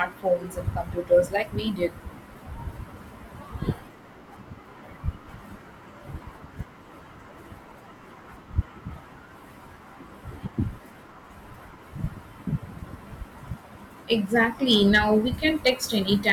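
Speech with hard clipping near the end, from 14.13 to 14.99 s and again from 15.45 to 15.70 s, where the level overdrives a stage by about 4 dB and peaks are cut flat, giving crackle on peaks. The waveform shows squared-off tops, and the spectrogram shows broadband harmonic smearing upward.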